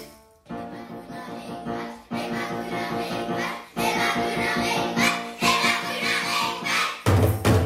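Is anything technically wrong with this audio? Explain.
No, nothing technically wrong stands out here; the audio sounds fine all the way through.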